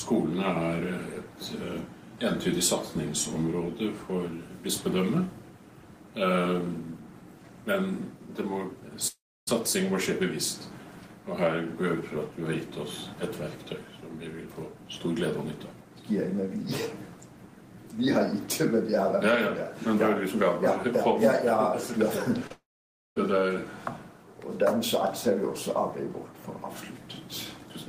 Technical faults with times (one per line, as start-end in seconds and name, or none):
9.07-9.49 long network dropout
22.47-22.52 short concealed packet loss
22.52-23.18 long network dropout